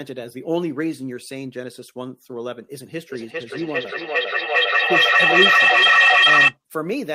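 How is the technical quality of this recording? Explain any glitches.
The recording has one serious glitch. From 3.1 s to 6.57 s there is feedback echo between two devices. Another device in the room replays this microphone's audio, and the microphone catches it again. Its echo canceller ignores that sound. The speech returns roughly every 0.4 s, thinner and ringing, building to about 12 dB above the speech.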